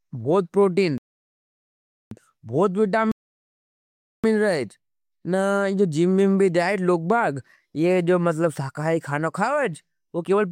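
The player twice runs out of downloaded speech and waits for more data, causing a rebuffering stall each time: silence from 0.98 to 2.11 s and from 3.12 to 4.24 s. Each adds about 1.1 s, and the speech picks up exactly where it stopped, with nothing missing.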